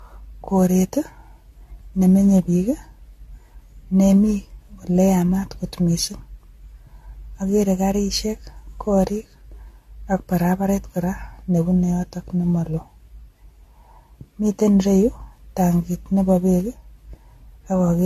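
From start to finish the speech has that swirly, hollow, smeared quality of generation loss, and the likely cause is the audio going through a lossy codec roughly seven times over. The character points to AAC-LC at around 64 kbit/s. Each re-encode lands on a fresh frame grid, so the quantisation noise and spectral holes keep piling up. Consonant attacks blur, and nothing survives above 14 kHz.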